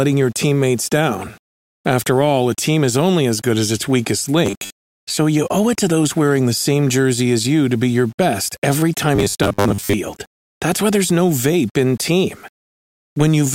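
A speech recording with grainy distortion throughout that follows the voice, with quantisation error sitting about 35 dB below the signal and collapsing into a gritty sputter on quiet tails. That marks low bit depth without dither, likely rounding to 8 bits, rather than steady hiss, which would persist in pauses. Between 4.46 and 5.20 s, after "good as its weakest" and before "you owe it to", and again from 9.15 to 9.93 s, after "be your best every", the voice turns into a rigid metallic buzz at 100 Hz. This is robotic sound from repeated short buffers, likely a 10 ms block replayed for most of that time. The steady pitched drone separates it from dropouts or stutter, which leave gaps or jumps instead.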